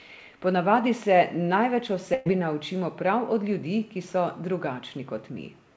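From 2.14 to 2.28 s, just after "navadi se največ o", the speech stalls into a held, fading buzz, then jumps ahead. This is a burst of packet loss: about 120 ms went missing, and the receiver stretched the last sound to cover it. Throughout the clip, nothing is heard above 8 kHz, which fits a G.722 call path.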